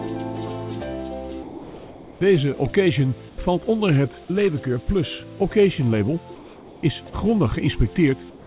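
Comfort noise in place of the background appears at 1.43–2.21 s, 3.29–3.38 s, 6.35–6.83 s and from 8.3 s to the end. In each case the real ambience gives way to a flat, featureless hiss about 2, 8, 3 and 2 dB quieter, likely from discontinuous transmission. Unlike a gate or dropout, these pauses never go silent. The audio itself stops at 4 kHz, which fits G.711 on the call path.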